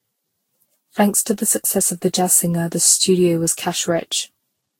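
Throughout the speech, the signal has most likely been through repeated lossy encoding, generation loss from something like ten successive Vorbis passes at around 60 kbit/s. Each re-encode quantises the audio again on a shifted frame grid, so noise and spectral gaps pile up rather than staying put. The result is swirly, hollow and smeared, with consonant attacks softened and blurred, and nothing survives above 16.6 kHz.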